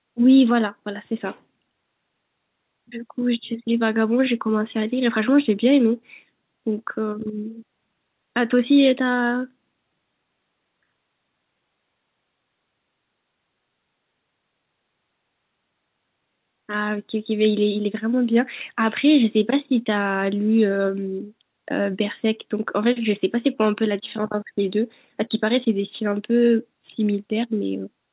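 There are no technical faults to describe in this speech, which comes over a call path whose G.711 A-law coding leaves nothing above 4 kHz.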